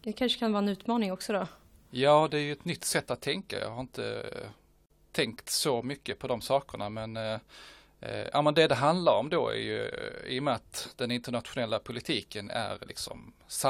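At about 4.86 s the speech drops out for roughly 43 ms, until 4.90 s, just before "tänkt så mycket på". That's a gap at a join of encoded pieces: the audio was encoded in separate chunks, cut every 10 s, and stuck back together without trimming, so one chunk's padded tail and the next chunk's start-up silence both stay in. You hear a quick hole with softened edges, then the speech resumes right where it stopped.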